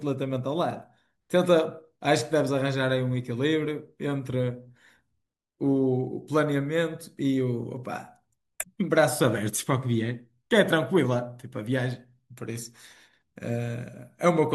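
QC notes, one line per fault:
Nothing to flag here; this speech recording came through without any faults worth a line.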